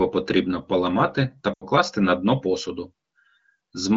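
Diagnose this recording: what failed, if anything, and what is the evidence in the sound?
Network and radio link stage, surfacing in the decoder as lost AMR speech frames: from 1.53 to 1.65 s the speech smears into a held tone that quickly fades to near silence. The gap is about 80 ms, which fits four consecutive 20 ms frames failing their checks. The AMR-WB decoder repeated the last good pitch and vocal tract settings with falling gain. On a spectrogram, frozen harmonics fade out, and the waveform envelope tapers before speech returns briefly weak.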